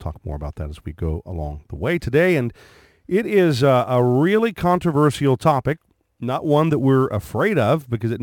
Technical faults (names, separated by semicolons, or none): sample clock jitter